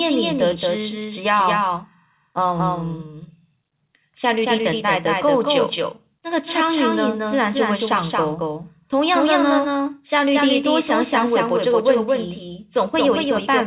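Throughout the speech, the same audio is mixed in twice, likely because a slower path captured it a second time. This doubled audio track trails about a fifth of a second behind, a few dB quieter and dry, so each syllable gets a slapback echo within the call's 4 kHz band.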